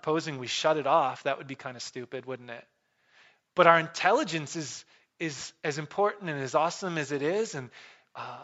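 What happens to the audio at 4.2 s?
Nothing goes wrong at 4.2 s; the speech carries straight through that moment intact, with only the ordinary band-limiting of call microphone processing, which leaves nothing above 8 kHz.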